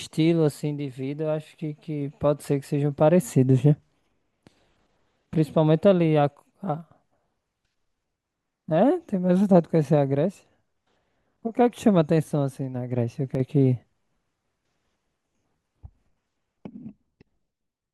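At 13.35 s the speech suddenly drops in level by about 6 dB, then returns at 13.4 s, a brief 50 ms dip that comes across as a quick flicker rather than a fade. The likely cause is one channel dropping out: one side of a stereo feed is lost for that instant, so after the two channels are summed to mono, the material they share falls by half in amplitude. Anything carried only on the missing side vanishes for those 50 ms.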